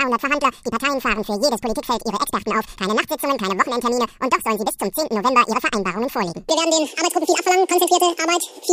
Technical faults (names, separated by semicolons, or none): audio read two samples at a time (double speed)